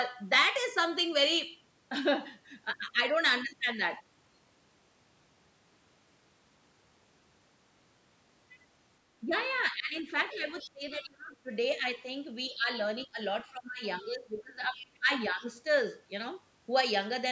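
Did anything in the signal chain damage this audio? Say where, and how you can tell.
Yes. In the call processing stage, speech suppressed in double talk pulls the talker down by roughly 10 to 20 dB at 9.22 to 9.31 s, 9.71 to 12.07 s, 12.5 to 12.69 s and 13.05 to 15.44 s. The likely cause is the echo canceller turning both sides down while both talked. A network dropout would cut out abruptly, but these are partial dips of roughly 10 to 20 dB.

The other side's voice leaking through can be heard as a second voice at 9.98 to 10.69 s and 14.77 to 14.98 s, about 20 dB below the talker. A faint scrap at 12.98 to 13.06 s sits about 35 dB down. This is likely loudspeaker echo that the canceller left behind. Room reverberation would only smear the talker's own sound, whereas this is a different voice.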